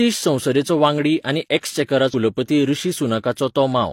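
At 2.09 to 2.14 s the speech breaks into a brief glitch: damaged data in a compressed stream left the decoder misreading frames. On a spectrogram it shows as a short broadband smear and an abrupt waveform discontinuity.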